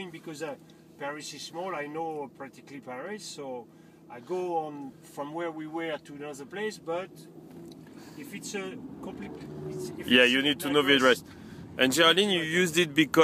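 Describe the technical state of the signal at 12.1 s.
At 12.1 s the signal is intact, with no dropout, distortion, clicks or other fault to be heard.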